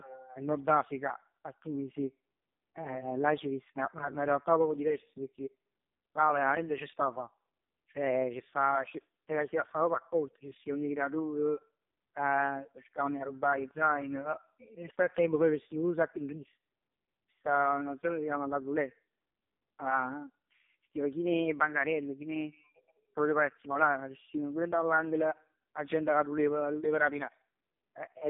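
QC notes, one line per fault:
Throughout: AMR narrowband mobile codec (AMR-NB). The speech is confined to a telephone band of roughly 200 Hz to 3.7 kHz, with nothing above 3.7 kHz, so sibilants and breath lose their edge. The codec damage is heavy. The voice sounds buzzy and synthetic because it is rebuilt from a vocal-tract model excited by very few pulses per 5 ms, which fits the lowest 4.75 kbps mode.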